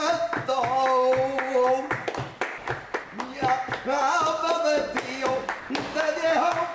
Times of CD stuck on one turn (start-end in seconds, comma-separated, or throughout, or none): none